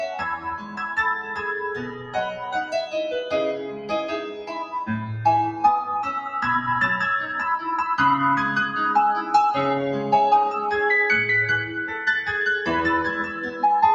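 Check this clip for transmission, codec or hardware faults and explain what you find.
The clip shows noise suppression faults: a speech-oriented suppressor is active throughout, and at several points it pulls down parts of the sound it mistakes for noise.

A noise suppressor applied to music or sounds runs for the whole clip. Treating steady and decaying material as noise, it rides the gain by around 10 dB, so sustained passages pump and thin while sharper onsets pass through largely intact.

Sound is cut by the noise suppressor at 0.36–0.97 s, 1.19–1.48 s, 1.73–2.94 s, 3.55–3.92 s, 4.2–4.74 s and 13.27–13.63 s. Held or fading portions sink by about 6 to 10 dB, deepest at 0.36, 1.73 and 4.2 s, and their tails end prematurely.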